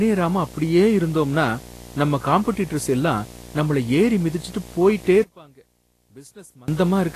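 Right from the start there's a video or display buzz riding under the speech the whole way through. It's a 60 Hz field-rate buzz with a fizzy hash on top, sitting roughly 20 dB below the voice, the kind of thing a screen or video cable leaks into the audio path.

Also throughout, the speech has a hissy, grainy texture, with roughened tones and smeared consonant attacks, and nothing at all above 14.2 kHz. That's plainly audible damage that likely comes from Vorbis compression at a low setting, something like 35 kbps, where the treble gets quantised so coarsely it turns into noise.

Then, right after "நம்மள ஏறி மிதிச்சுட்டு போயிட்டே", from 5.24 to 6.68 s, the voice collapses by about 25 dB into a faint ghost. That likely points to one channel inverted: the centred speech cancels on a mono sum, leaving only the small left-right difference.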